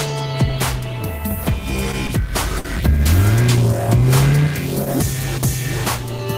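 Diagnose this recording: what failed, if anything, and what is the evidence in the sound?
Network jitter buffer: two short stalls from a late packet, at 2.07 s and 2.59 s, where the last sound is held about 18 ms and 58 ms with a slight buzz or dip. The sound then resumes exactly where it stopped, unlike packet loss, which drops material.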